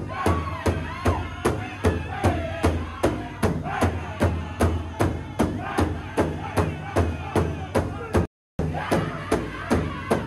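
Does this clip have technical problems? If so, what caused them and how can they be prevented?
Yes. A playback stall runs from 8.25 to 8.59 s, where the sound cuts out mid-flow for 0.34 s, then resumes. The likely cause is the player running out of buffered data or its thread being blocked. A larger playback buffer and a higher-priority audio thread would prevent it.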